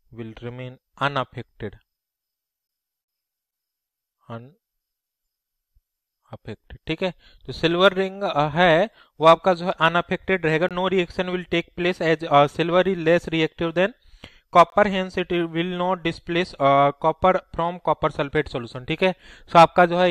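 Gaps between stream segments cut into the audio at 2.67 s, 6.69 s, 10.69 to 10.71 s, 14.70 to 14.72 s and 18.74 s, each a hard-edged hole of silence lasting from about 3 ms up to 22 ms. The four-second spacing points to segment boundaries: the timestamps of consecutive segments don't quite meet, so the player pads the mismatch with silence. Nothing is missing from the audio; the holes only add time.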